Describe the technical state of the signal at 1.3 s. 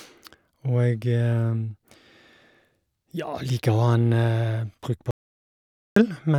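At 1.3 s the speech signal is intact, with no technical fault present at that moment.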